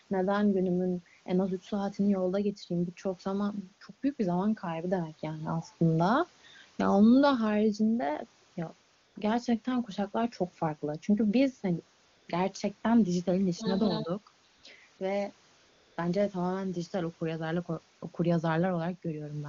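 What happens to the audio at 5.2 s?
Nothing goes wrong at 5.2 s: the speech carries on intact through that moment, with the AMR wideband (HD Voice) coding staying clear and showing at most faint coding traces.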